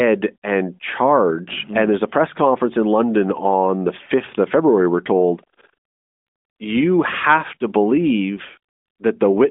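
No technical faults can be heard in this recording.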